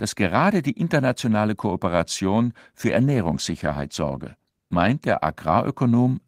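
At 2.82 s the speech hits a call bitrate drop that lasts until about 6.03 s. The connection's bandwidth estimate fell, so the encoder was told to spend far fewer bits and started coding everything more coarsely. You can hear it go rougher and watery, with detail smeared out, which fits a cut from around 32 kbps down to about 17 kbps. It sits at its worst for roughly two seconds before easing back toward the end.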